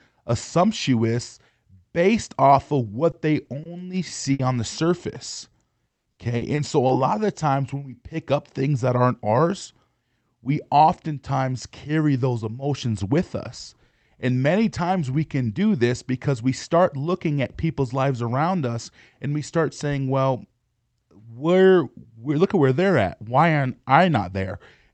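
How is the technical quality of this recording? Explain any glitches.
The recording has three kinds of packet-loss glitches, all in the first seven seconds. It passed through a call codec whose audio stops near 8 kHz, which fits Opus at around 40 kbps.

Short concealed packet loss hits three times, at 3.11 to 3.15 s (just after "assumptuous based off of"), 3.45 to 3.49 s and 3.63 to 3.67 s. Each time, about 20 ms of audio arrived too late, and the decoder extended the preceding sound to cover it. Each gap is heard as a brief smear or wobble.

A burst of packet loss at 4.33 to 4.41 s, just before "on the", lost about 60 ms in a row. The receiver stretched the last sound and let it fade, leaving a short held buzz or hiss before the speech picks up slightly further on.

Repeated packet loss (robotic sound) runs from 5.33 to 6.91 s, ending just before "of the times when". Seven separate gaps, the longest about 180 ms, were each patched by continuation, covering about 22% of that stretch. 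The speech turns choppy there, with fragments missing.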